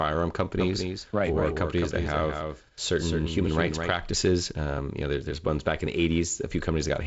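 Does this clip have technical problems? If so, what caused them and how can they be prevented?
Yes. A doubled audio track runs from 0.60 to 3.94 s. A full-band copy of the speech trails about a fifth of a second behind, a few decibels quieter, with no decay or room colour. It starts and stops abruptly, likely because a second, slower capture path was mixed in. To prevent it, feed the source through a single capture path and mute any loopback or monitor return before recording.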